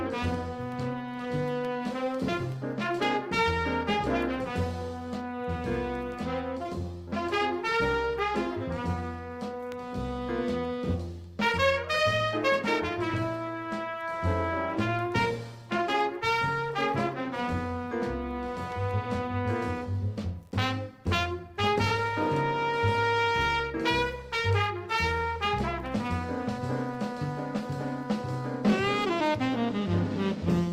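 No technical faults are audible.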